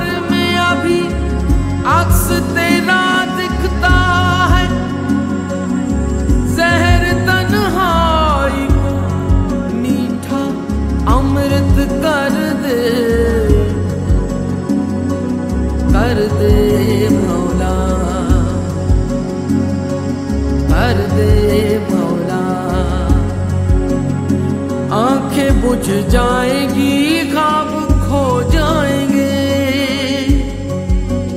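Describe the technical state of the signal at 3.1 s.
At 3.14 s there is a tiny jump forward in the sound, with no gap of silence. This is likely a dropped buffer (overrun): a few milliseconds of samples were overwritten before being read, and the two sides were butted together.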